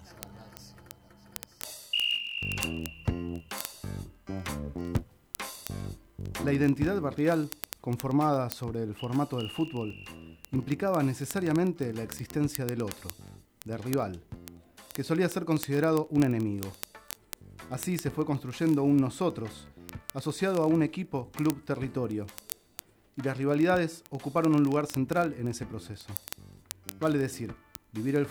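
A rapid, sharp ticking runs from 0.12 s to 28.30 s, roughly fifty times a second: word clock ticks, from an unlocked digital receiver slipping samples against a sender's clock.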